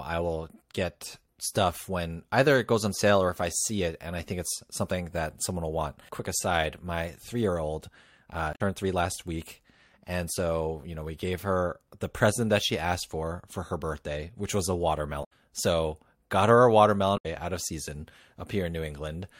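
At 8.50 to 8.61 s, just before "three last week and", the speech is interrupted by damaged data in a compressed stream, lasting about 0.1 s. It recurs at 15.20 to 15.31 s after "birthday which was a" and at 17.14 to 17.26 s after "got her a". In each case corrupted bytes make the decoder misread or reject frames and lose sync until it locks onto a later frame header, producing a brief chirp, squawk, click or gap.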